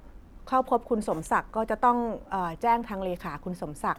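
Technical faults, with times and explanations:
Nothing stood out on listening to this speech recording.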